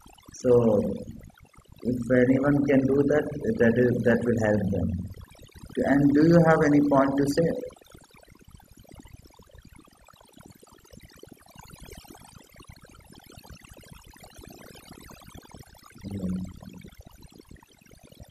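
Overdone noise removal runs throughout: an over-aggressive reduction gates frequency bands near the noise estimate, leaving near-silent gaps with twinkling specks.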